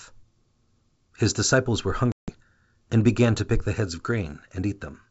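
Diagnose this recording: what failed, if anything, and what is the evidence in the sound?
Network stage: packet loss on an ADPCM call. After "disciples were", the speech drops to a hard-edged silence from 2.12 to 2.40 s, with about 160 ms of audio missing, which fits several consecutive packets lost. The gap was filled with silence. On resumption at "and began to pick", the decoder's adaptive predictor and step size no longer match the sender's, so the restart is disturbed until the state re-converges. The wideband G.722 coding around the gap sounds as expected.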